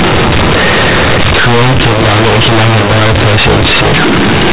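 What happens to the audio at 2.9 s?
At 2.9 s, as across the whole recording, A-law companded audio is being read as linear 8-bit samples: the telephone-coded bytes go straight to the output without being expanded back to their true levels. Every sign change throws the waveform across roughly half its range, so soft and loud passages come out equally huge and badly misshapen. The speech sounds harshly loud and buzzy, with heavy noise filling the gaps.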